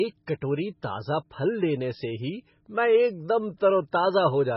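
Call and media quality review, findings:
Watery, swirling speech throughout, s sounds chirpy and metallic, consonant attacks smeared, nothing above 5.6 kHz. Likely MP3 compression, heavily starved (fits roughly 16 kbps): encoder cuts treble at fixed frequency, weak frequency lines flicker on and off between frames.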